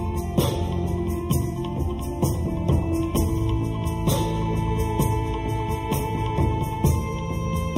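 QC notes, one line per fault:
Throughout: channel delay (comb filtering). One side runs late by roughly a third of a millisecond, so the mono sum notches out near 1.5 kHz and up, leaving things hollow and phasey.
5.93 to 6.00 s: loose connector crackle. A short scratchy burst, about 70 ms, where a dodgy contact chops the signal on and off.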